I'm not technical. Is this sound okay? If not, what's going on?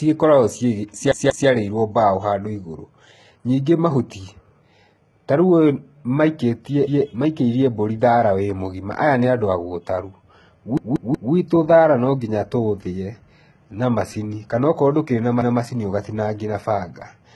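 No. Repeated buffer at 1.12 to 1.49 s, 6.87 to 7.06 s, 10.77 to 11.33 s and 15.42 to 15.60 s: new audio arrived late, so the player replayed the last snippet of about 0.19 s, causing stutters. It repeats twice just before "mbaũ handũ", once at 6.87 s, three times just before "thaara no nginya tũũthĩe", and once between "ndũkĩrĩ na" and "ũgatinangia na".

HE-AAC compression, throughout: the high end sounds heavily damaged, likely from this codec, which keeps only the lower sound and fakes the treble by copying it upward.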